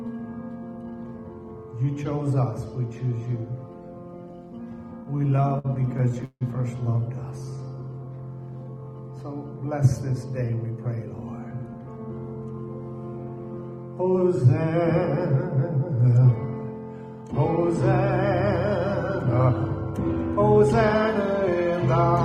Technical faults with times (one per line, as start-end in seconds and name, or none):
5.03-6.43 repeated stalls (stutter)
7.45-8.05 jitter buffer slow-down
10.10-11.21 jitter buffer speed-up
19.49-20.61 jitter buffer speed-up